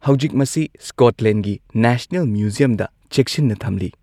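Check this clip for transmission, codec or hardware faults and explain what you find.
Nothing faulty can be heard anywhere in the speech.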